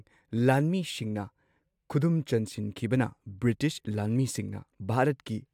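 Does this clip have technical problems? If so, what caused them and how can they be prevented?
No, the speech signal holds steady throughout, with no audible technical faults to trace or prevent.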